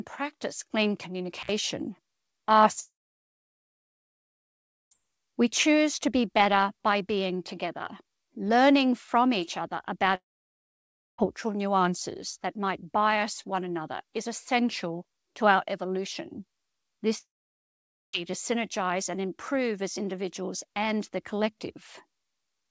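At 1.40 to 1.52 s, just after "practice clean", an intermittent contact opens the line for about 62 ms. The speech cuts out with crackle at each edge and faint hiss in the gap, the sound of a plug or cable briefly losing connection.

Three long network dropouts follow, at 2.80 to 4.94 s, at 10.15 to 11.21 s after "learning from each other" and before "nuances that might bias", and at 17.18 to 18.16 s before "to synergize and improve". Each is likely a stretch of lost packets. The last sound is stretched into a fading buzz or hiss, then silence runs for about 2.0 s, 0.97 s and 0.87 s. Speech resumes with that section missing.

Throughout, the band stops at 8 kHz, which fits a G.722 call codec.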